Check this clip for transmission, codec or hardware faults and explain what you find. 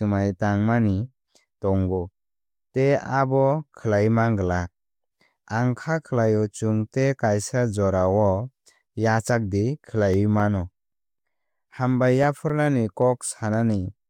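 One fault is audible, CD scratch ticks, from 10.14 to 13.28 s: thirteen regular ticks, about four per second, the longest about 3 ms. A disc blemish defeats error correction once per rotation. On a spectrogram they are thin vertical broadband lines; on the waveform, brief spikes or gaps.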